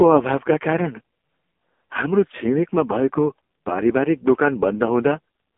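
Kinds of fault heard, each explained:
AMR narrowband mobile codec: The speech has gone through the old 2G/3G phone codec, which rebuilds the voice from a vocal-tract model fed only a few pulses every few milliseconds. Here the band runs from about 250 Hz to 3.4 kHz, with nothing above 3.6 kHz. The damage is heavy, leaving a buzzy, synthetic edge all the way through that points to the codec's lowest mode, around 4.75 kbps.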